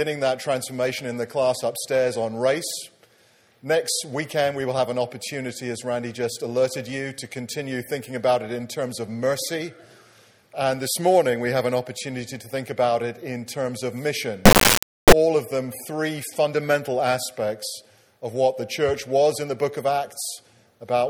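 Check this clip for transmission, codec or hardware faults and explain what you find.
One fault is present: an integer-read-as-float error from 14.45 to 15.12 s. Samples stored as 32-bit integers are interpreted as 32-bit floats, so values land near zero or far past full scale. Output slams between silence and clipping, producing a harsh, very loud square-wave buzz.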